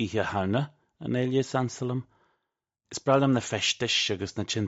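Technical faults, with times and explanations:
Nothing technical goes wrong anywhere in the recording, so there's nothing here to flag.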